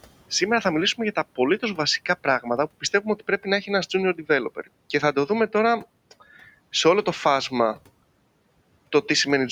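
From 2.81 to 3.47 s, speech is cut by the noise suppressor. It mistakes quiet speech for background and drops it by up to about 13 dB, roughly 150 ms in total, so parts of the speech sound swallowed or faint. A spectrogram shows speech energy dimmed in patches.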